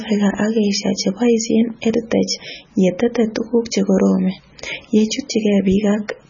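Throughout the speech, a watery, swirling texture with metallic chirps on s sounds comes from heavy MP3 compression, likely at a bitrate near 16 kbps. A spectrogram shows a hard ceiling at 7 kHz and blotchy gaps where weak components flicker on and off.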